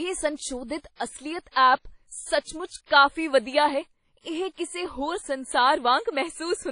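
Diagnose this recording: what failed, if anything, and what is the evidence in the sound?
The fault sits at the codec stage. Throughout the speech, nothing is present above 10.1 kHz, and the damage is plainly audible: a ringing, washy quality with a hiss that swells and fades with the voice. That signal-following noise is what separates it from a simple low-pass filter or a steady noise floor. The sound points to WMA compression at a low bitrate, around 32 kbps, which is likely the cause.

A pre-echo runs from 2.86 to 2.90 s. It is a burst of hiss about 46 ms long that arrives just before a sharp onset, which then sounds softened and smeared. It is a codec artefact, not acoustic echo or a click. The added sound comes before the attack rather than after it, and it is noise, not a delayed copy. The transform block's quantisation noise, scaled to the loud onset, has spread back into the quiet moment before it.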